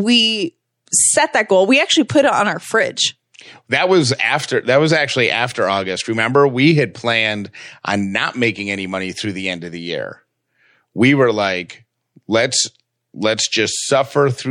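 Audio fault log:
throughout MP3 compression, likely from a bitrate around 64 kbps: weak frequency lines flicker between frames, making s sounds watery and swirling, unlike a plain treble cut.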